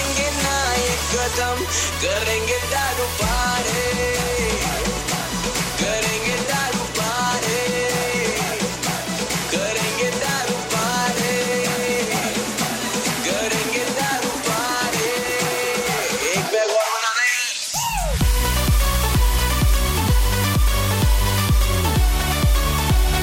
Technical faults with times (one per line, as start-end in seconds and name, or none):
none